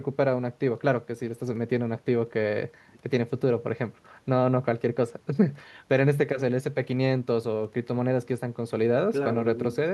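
No technical faults can be heard in the speech.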